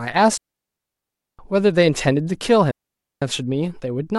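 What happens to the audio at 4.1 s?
Nothing goes wrong at 4.1 s; the speech runs on intact through that moment, with no dropout, click or distortion.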